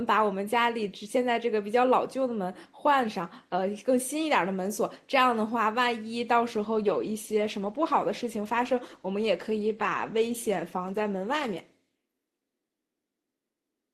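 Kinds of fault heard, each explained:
Call bitrate drop: from 6.57 s to 11.63 s the speech turns coarse, watery and muffled, which fits the encoder being forced from around 32 kbps down to about 15 kbps after the call's bandwidth estimate fell, before recovering.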